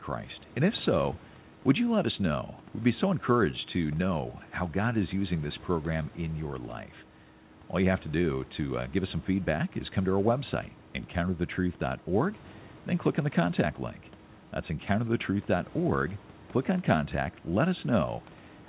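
Nothing here goes wrong technically; the faint room noise sits about 26 dB under the speech, and the top end stops at 4 kHz as you'd expect from a call line.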